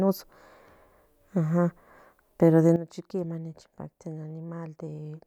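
At 2.76 s a sudden gain jump drops the speech and its background noise together by about 12 dB, and the level stays down to the end. The step is instantaneous rather than ramped, likely from a gain setting or bit shift applied between two consecutive samples.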